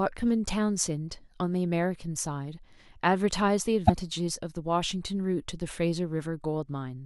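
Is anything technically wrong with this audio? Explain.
Yes. From 3.83 to 3.90 s, damaged data in the compressed stream made the decoder misread frames and lose sync, putting a brief garbled blip into the speech.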